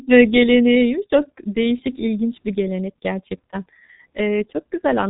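From start to finish, the speech carries the sound of the G.723.1 codec, and the damage is heavy. Nothing comes through above 3.8 kHz, so the voice is dull and muffled. The codec's voice model updates slowly, in long frames, which leaves a rough, hoarse texture. Consonants smear into the sounds around them. The thinness points to a very low bitrate, around 6 kbit/s.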